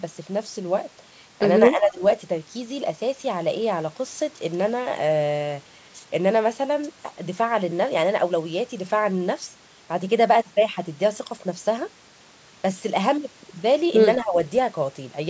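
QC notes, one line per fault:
1.73–2.01 s and 14.22–14.38 s, speech suppressed in double talk: the speech briefly dips by about 15 dB, then about 10 dB, likely from an echo canceller turning down overlapping talk.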